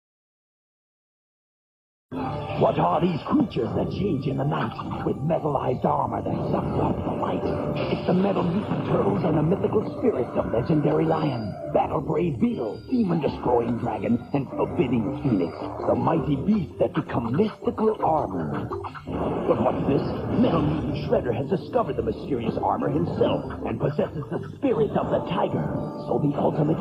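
No technical faults can be heard anywhere in the audio. Nothing in it calls for a time stamp or a cause.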